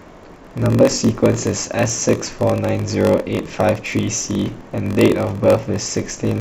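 Throughout, the speech carries a low buzz at 46.9 Hz. This is a block size mismatch (padded). Each block is written short, and zeros fill the rest, which fits a 1024-sample read. The speech drags at 0.938 times normal speed, with timbre unchanged.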